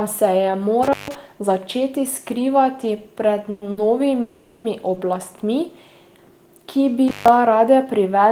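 Intermittent contact in this speech recording breaks the signal at 0.83–1.15 s, just before "začeti skrivati pred", and again at 7.08–7.28 s. Each time, a loose connection opens for roughly 150 ms, so the sound drops out with crackle at both edges and only faint hiss is left. Call audio freeze appears at 3.50–3.63 s, right after "začeti skrivati pred", and at 4.21–4.66 s. The last sound is continued as a fading buzz or hiss for 110 ms and then 430 ms, with no silence. This is likely packets held up in transit, leaving the jitter buffer empty, and the audio resumes where it stopped, so nothing is lost but a gap is added. A short stall from a late packet occurs at 3.71–3.79 s and at 4.94–4.98 s. Here the receiver stretches the current sound by 60 ms and 20 ms while waiting for the overdue packet, giving a briefly held sound with a slight buzz or dip before it continues with nothing missing.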